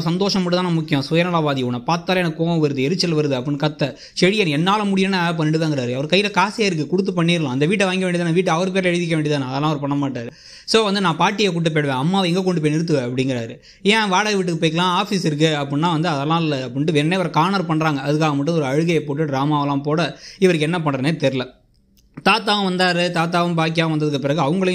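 Compressed frames skipped at 10.20 to 10.29 s: the audio jumps forward by about a tenth of a second, as whole frames of the coded stream were lost or rejected as damaged.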